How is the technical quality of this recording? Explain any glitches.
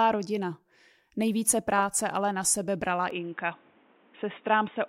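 The recording holds up until its final stretch, where the sound abruptly changes character. From about 3.1 s, right after "ale na sebe brala", to the end, the speech loses everything above about 3.8 kHz and turns dull and boxy, with faint new background noise well beneath it. The likely cause is an input switched to a poorer device. The level stays the same and there is no gap. What sets it apart from a simple filter is the new noise floor arriving along with the narrower band.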